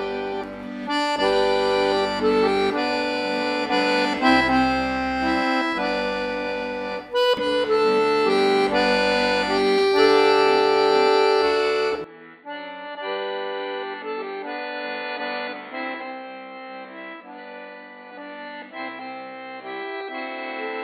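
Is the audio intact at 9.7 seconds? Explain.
Yes, the audio at 9.7 seconds is intact, with no dropout, click, distortion or other fault at that moment.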